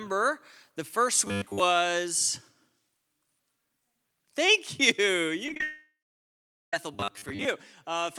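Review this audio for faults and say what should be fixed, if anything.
Robotic sound from repeated short buffers: from 1.26 to 1.60 s, just after "the first", and again from 6.94 to 7.45 s, the speech turns into a rigid metallic buzz at 100 Hz. This is likely an audio thread being starved, so the software repeats its last 10 ms chunk while new audio is skipped: most of the first stretch and about half of the second. Giving the audio thread higher priority or a larger buffer would prevent it.

Repeated packet loss (robotic sound): between 5.46 and 5.63 s the speech goes choppy and robotic. A rapid run of lost packets leaves holes, the longest 31 ms, each patched by stretching the preceding sound. About half of the span is concealed, and 90 ms of audio is missing. Forward error correction or a more adaptive jitter buffer would prevent it.

Long network dropout: from 5.63 to 6.73 s the receiver keeps stretching the last sound into a fading buzz, then nothing at all for about 0.82 s. 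When the speech comes back, 1.1 s of it is missing. The likely cause is a network stall during which no audio arrived. A more stable connection, or redundancy that survives longer outages, would prevent it.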